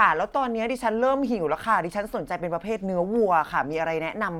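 A short recording of speech with no technical fault audible anywhere in it. Nothing in the signal calls for a time, a value or a cause.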